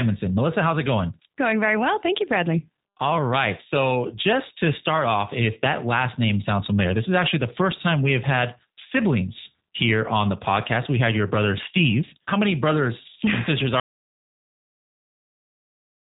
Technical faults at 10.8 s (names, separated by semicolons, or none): G.729 codec